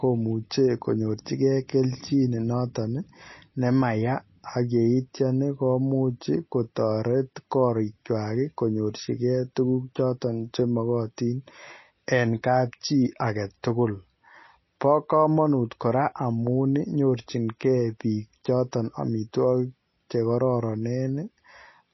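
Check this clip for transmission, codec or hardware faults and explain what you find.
There is one fault, and it runs through the whole recording. From start to finish the speech has nothing above 5.8 kHz. It sounds dull, with a watery, swirling texture. S sounds turn metallic and chirpy. This is most likely MP3 compression at a low bitrate, which fits roughly 24 kbps. With so few bits, the encoder cuts all treble above that fixed point. It also drops weak frequency lines, and these flicker on and off from frame to frame. That flicker is the swirl.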